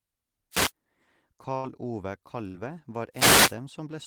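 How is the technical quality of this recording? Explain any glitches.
The technical quality is compromised by two kinds of fault, each occurring twice in this speech recording.

From 0.51 to 0.72 s, and again from 3.12 to 3.56 s, a swish of static rises over the voice. These are wireless microphone noise hits: the analogue FM radio signal fades as reflections cancel, letting receiver noise swell up and mask the speech.

At 1.57 to 1.66 s and 2.47 to 2.58 s, the sound briefly freezes into a held, fading sound and then jumps ahead. Each is a burst of packet loss. The receiver stretched the last audio for about 61 and 65 ms, while roughly 60 ms of speech never arrived. At the second gap, a further 12 ms was dropped as playback rejoined.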